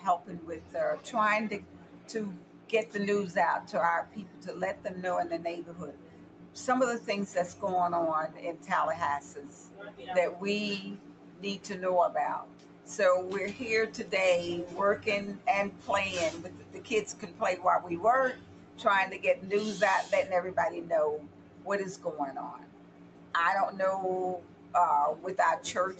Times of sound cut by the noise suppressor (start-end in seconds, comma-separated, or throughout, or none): 0.00-18.79, 21.19-25.99